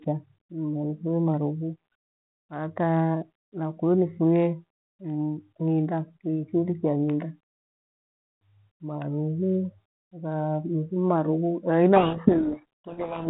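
A speech clip carried over G.726 at 32 kbit/s, band-limited below 4 kHz with light coding noise. From 11.96 s to the end, the speech is buried in harsh, grinding distortion: a codec payload misread, where the bit order of the G.726 code words is flipped between sender and receiver, so the sample differences are decoded wrong. Light G.726 coding noise rides along with the speech from the start. This distortion begins abruptly and swamps it.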